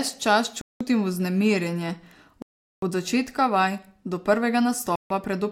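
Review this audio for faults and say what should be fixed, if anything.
The speech drops out three times, at 0.61–0.81 s before "vznemirjenje od začetka vaj", at 2.42–2.83 s before "od začetka vaj do", and at 4.96–5.11 s. Each gap shows as a flat waveform and a blank spectrogram column. These are likely Bluetooth stalls, with the headphone buffer running dry while delayed packets were resent. Keeping the link short and clear of interference would prevent them.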